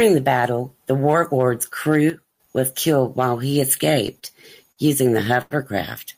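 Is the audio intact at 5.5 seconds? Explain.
No. A short stall from a late packet runs from 5.42 to 5.54 s, just after "using the". A packet arrived late, so the jitter buffer ran dry and the receiver held the last sound in place for about 88 ms until the data came in. Playback then resumed from the same point, so nothing is lost, but the sound is drawn out unnaturally, with a faint buzz or dip, and everything after it lands 88 ms late.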